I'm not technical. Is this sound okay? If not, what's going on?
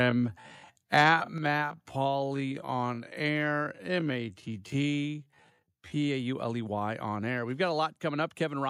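No. From the start to 6.08 s there is a time-stretched section. Software most likely slowed this stretch to about half speed to fill a set length, and kept the pitch normal by repeating tiny slices of the sound. So the pace suddenly drags while the pitch stays where it should be, until normal speed returns after 6.08 s.

Between 0.94 and 1.1 s there is microphone overload. The microphone's input was likely set too high, so the loudest moments went past the most the microphone's converter could handle and their tops were cut flat. Only a small share of the sound was affected, but in that brief moment the peaks have a harsh, crackly edge instead of a clean, round sound.

At 1.38 s the microphone volume stepped down. Right after that distorted peak, the call software likely decided the microphone was too loud and turned its input down in a single step. The speech and the background both drop in loudness all at once, so it sounds as if someone abruptly turned a volume knob partway down.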